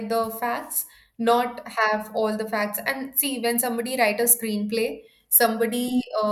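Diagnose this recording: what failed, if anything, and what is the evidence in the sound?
Nothing failed; the speech carries no audible technical fault.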